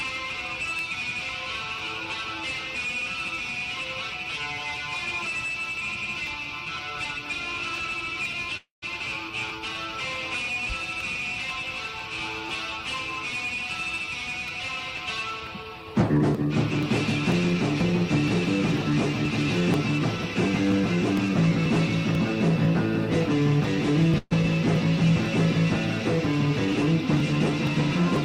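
Regular ticks run through the audio from 0.30 s to 28.16 s, one every 0.50 s, about fifty in all. These are periodic USB or driver dropouts: something stalls the bus or driver on a fixed cycle, and a few milliseconds of audio are skipped each time, so the ticks appear only where there is signal. At 8.57 to 8.84 s the sound hangs as a fading buzz or hiss for 253 ms, ending in roughly 150 ms of silence, then resumes where it stopped. A shorter hang of 128 ms follows at 24.18 to 24.33 s, with only about 10 ms of silence. Both are call audio freezes, likely caused by delayed packets draining the jitter buffer. Nothing is lost, but each freeze adds its length to the delay. From 15.79 s to 21.29 s the audio plays about 4% fast at unchanged pitch, and from 26.33 s to 28.03 s it plays about 3% fast. This is jitter buffer speed-up: the receiver trims short pitch-period slices to work off the surplus backlog, roughly 0.3 s in the first stretch and about 70 ms in the second.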